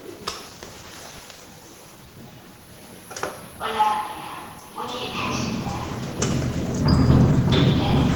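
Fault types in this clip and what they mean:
Opus compression: Throughout, the sound is plainly grainy, rough and hoarse, yet it still reaches 20.1 kHz. This likely comes from Opus hybrid mode at about 16 kbps.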